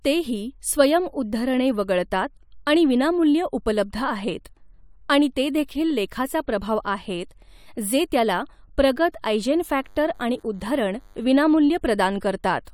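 A thin, steady buzz sits faintly under this speech clip from 9.32 to 11.32 s, starting just after "आहेत जे त्याला प्रगत" and lasting two seconds, well below the speech level. This is DECT cordless phone buzz: a nearby handset or base transmits a radio burst every 10 ms, and the audio circuitry rectifies it into a 100 Hz tone rich in harmonics.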